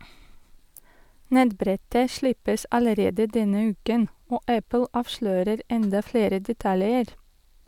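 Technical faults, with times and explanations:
No technical faults occur in this speech recording, so there are no times or explanations to give.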